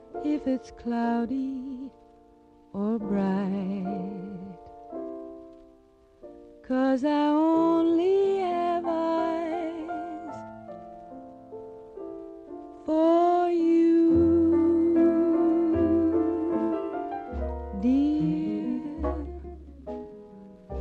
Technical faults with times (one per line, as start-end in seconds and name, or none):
none